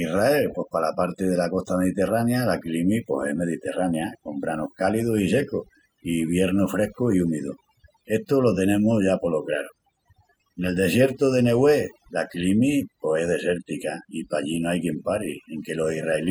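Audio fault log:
Throughout, overdone noise removal: a noise reduction stage set far too aggressively pulls individual frequency bands down or out wherever they sit near its noise estimate, taking quieter speech detail with them, so the background drops and breaks up into twinkling specks.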